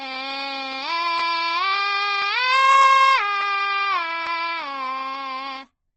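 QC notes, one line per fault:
throughout, Opus compression: the music sounds rough and grainy with nothing above 8 kHz, likely a low-rate Opus encode in its music mode, fitting something around 12 kbps.
2.49 to 3.16 s, hard clipping: the signal overshoots its ceiling by about 5 dB, so peaks get sliced flat, and the squared-off tops spray high harmonics.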